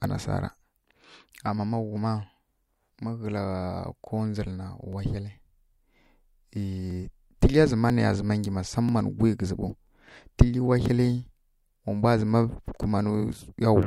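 Periodic USB or driver dropouts affect this speech recording. From 0.97 s to 13.83 s, a stall in the USB bus or audio driver recurs every 0.99 s, each time skipping about 10 ms of audio outright. The result is around fifteen evenly spaced ticks, heard wherever speech is present.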